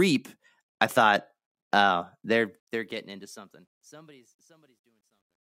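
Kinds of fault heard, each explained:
Truncation distortion on a fade: the fade-out, starting around 2 s after "I thought oh", turns gritty from 2.23 s because the level stage drops bits without dither, which fits 12-bit steps. From 3.82 to 5.57 s the grit is at its worst.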